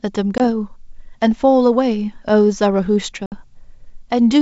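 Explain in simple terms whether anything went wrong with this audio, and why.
Two short silent holes, at 0.38 to 0.41 s and 3.26 to 3.35 s, with a brief rough restart: packet loss on an ADPCM call, which knocks the decoder briefly out of step.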